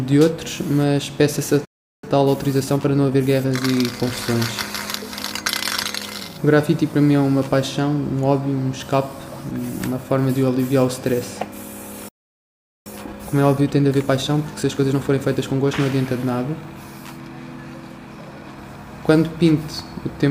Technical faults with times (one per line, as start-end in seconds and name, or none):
1.65-2.03 playback stall
2.03-3.55 time-compressed catch-up
12.08-12.86 playback stall
12.86-15.86 time-compressed catch-up